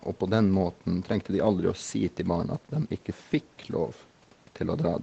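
Nothing goes wrong here; the speech just has the ordinary sound of a call, with nothing above 8 kHz and the usual coding texture that fits a low-bitrate Opus link of around 20 kbps.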